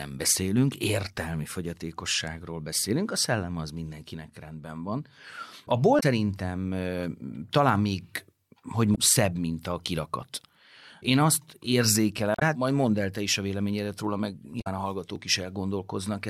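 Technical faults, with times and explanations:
5.96–6.03 s, 8.92–8.98 s, 12.33–12.42 s and 14.58–14.67 s: damaged data in a compressed stream. Each is a short chirp or blip lasting about 70 to 95 ms. Corrupted bytes make the decoder misread those frames, lose sync and search for the next valid frame header.
9.17 s and 15.16 s: audio missing between chunks. Two tiny skips, each losing only a few milliseconds, with the two sides joined directly and no silence between them. Their 6 s spacing points to the likely cause: the recorder works in 6-second chunks and drops a sliver at each handover.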